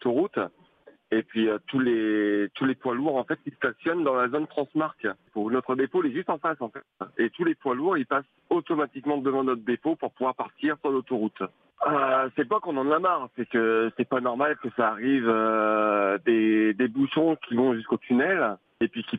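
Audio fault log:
No fault can be heard anywhere in the clip. Nothing in the audio calls for a time or a cause to be logged.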